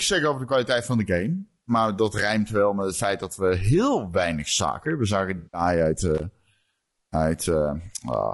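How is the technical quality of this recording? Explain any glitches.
The recording has audible technical problems: a constant roughness throughout, plus two brief glitches in the second half.

Across the whole clip the speech sounds rough and grainy, with noise between the harmonics and a thin, somewhat synthetic top end. The likely cause is low-delay AAC compression (AAC-ELD). Its short frames resolve pitch harmonics poorly, and the damage here fits a low bitrate of about 32 kbps.

From 5.37 to 5.61 s there is a smeared, noisy, phasey patch. This is AAC frame loss with concealment. About 160 ms of audio, consistent with eight short frames, never arrived, so the decoder filled the gap by reusing and scrambling the last good spectrum.

From 6.15 to 6.23 s there is a short, irregular burst of scratchy crackle. It is loose connector crackle: a worn or dirty contact made and broke the circuit rapidly, chopping the signal for about 80 ms.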